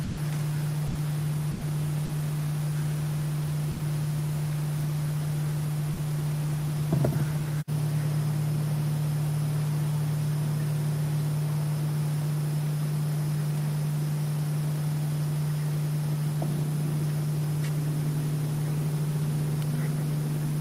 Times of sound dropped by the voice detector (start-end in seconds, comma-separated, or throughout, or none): 0.03-0.17, 0.87-0.95, 1.51-1.61, 2.05-2.09, 3.71-3.79, 5.93-5.97